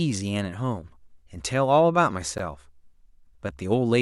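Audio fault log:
2.38 s, Bluetooth stall: the speech drops out for a very brief 13 ms gap of silence and then carries on, so you hear a tiny tick-like hole rather than a proper pause. The likely cause is radio interference holding up packets on the wireless link long enough for the headphones' small playback buffer to run empty, leaving nothing to play until the delayed or resent audio came through.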